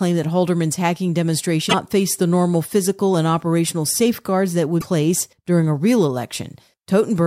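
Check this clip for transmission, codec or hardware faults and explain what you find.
The speech has two short faults from damaged data in a compressed stream. They occur at 1.66 to 1.74 s and at 4.77 to 4.84 s, each lasting about 70 to 80 ms. In both places the compressed data was wrong. The decoder misread those frames and lost sync, then hunted for the next valid frame header before it could resume. Each one is heard as a brief chirp, squawk, click or short hole cutting across the speech.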